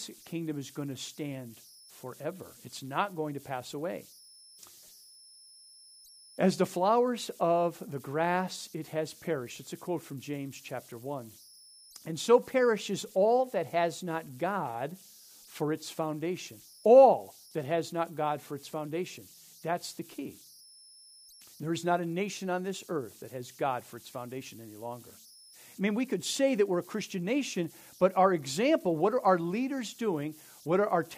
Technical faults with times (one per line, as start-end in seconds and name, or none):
0.00-31.17 converter idle tones